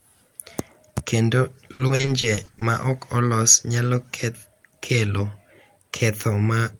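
From 1.73 to 2.63 s, just before "ma ok olos nyalo", the speech breaks into repeated packet loss with a robotic sound. Packets kept arriving lost or late, and each hole was patched by stretching the preceding sound. The result is choppy, with pieces missing. About 280 ms is missing across roughly a dozen short holes, the longest 60 ms, and nearly a third of that stretch is filled-in sound. A single dropout would leave one clean hole, not this rapid stutter.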